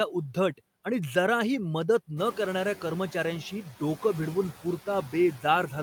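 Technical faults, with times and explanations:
Throughout: noise suppressor artifacts. Steady room noise is cut by about 14 dB between words, so it sinks in gaps and returns under speech, most plainly after it rises near 2 s.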